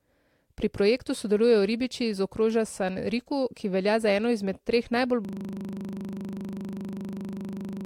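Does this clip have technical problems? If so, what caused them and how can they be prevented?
Yes. A system hang loop starts at 5.25 s and runs to the end. The driver or computer froze while the hardware replayed one 40 ms slice about 65 times. That gives a rough 25 Hz buzz. Prevent it with stable drivers and watchdogs that mute stalled output.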